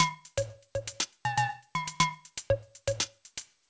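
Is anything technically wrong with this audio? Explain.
No, nothing stood out as a technical problem on listening, and the absence of content above 8 kHz is simply what the 64 kbps G.722 call path it passed through produces.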